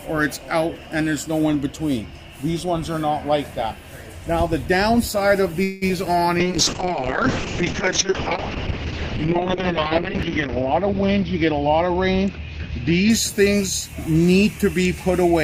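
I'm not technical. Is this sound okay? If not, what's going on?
No, it has three problems.

From 5.63 to 6.07 s there is repeated packet loss (robotic sound). Pieces of the audio went missing four times in under half a second. The longest gap was 182 ms. Each time, the receiver patched the hole by stretching the last bit of sound it had. About half of that short stretch is patched-in sound like this. So it comes out choppy, with bits clearly missing.

From 6.41 to 13.42 s there is a call bitrate drop. The connection seemed to get worse, so the sender was told to squeeze the audio into far less data. The sound gets coarser. It also loses its top end, since everything above about 6 kHz is cut off, where it normally reaches 20 kHz. The worst part lasts about 3.8 s. The quality comes back before the clip ends.

From 11.03 to 13.09 s there is a jitter buffer speed-up. The receiver had built up too much waiting audio. 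To catch up, it cut out many tiny slices, roughly 0.15 s in total. The pitch stays the same, but the sound plays at about 108% speed. That is fast enough to sound hurried.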